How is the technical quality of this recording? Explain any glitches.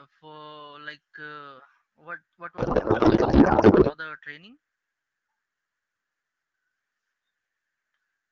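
The recording has one clear glitch, a codec payload misread, set against AMR wideband (HD Voice) coding whose light coloration fits about 12.65 kbit/s.

Codec payload misread, 2.57 to 3.97 s: after "like uh what what", the speech turns into garbled noise and warble that barely tracks it, until "the training". The octet-aligned AMR frames were decoded as bandwidth-efficient, so every field was read from the wrong bits. Unlike packet loss, which gives gaps or smoothed concealment, the sound here keeps going but is nonsense.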